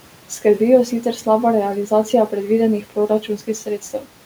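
The noise suppressor misjudged parts of the speech as background noise and turned them down along with the room noise, which sits about 22 dB below the speech. Just after "jo sicer slaba realizacija", between 2.82 and 3.48 s, speech cut by the noise suppressor dips by up to about 12 dB. It happens again from 3.66 to 4.06 s, by up to about 9 dB. Each stretch loses only a brief fraction of its sound, leaving those bits swallowed and faint.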